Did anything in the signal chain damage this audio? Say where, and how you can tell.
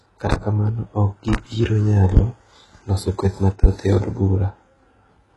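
Yes. Throughout the speech, the treble above the lower band sounds synthetic and gritty, with heavy codec damage and nothing above 11.5 kHz. This points to HE-AAC compression at a very low rate, likely around 12 kbps, where spectral band replication rebuilds the top end.

Four sharp loud pops, about 20 dB above the speech, land at 0.32–0.36, 1.33–1.37, 2.17–2.20 and 3.64–3.67 s. The last falls between "loso kweth" and "e od". Each is a single pulse with speech continuing underneath, likely a voltage step from the analogue wiring or a driver glitch.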